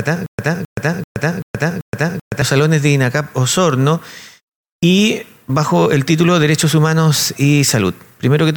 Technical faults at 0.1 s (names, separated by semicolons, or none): stutter with silent gaps